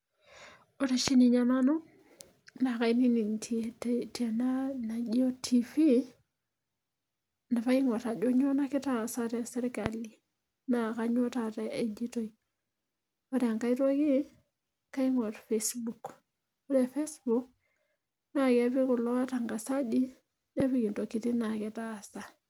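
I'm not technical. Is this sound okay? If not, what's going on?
No, not quite. There's a loud pop at about 1.08, 9.86 and 20.60 seconds: a single sharp click jumping out over the speech, which carries on underneath. It's likely a quick electrical jolt, like a plug, switch or bit of static.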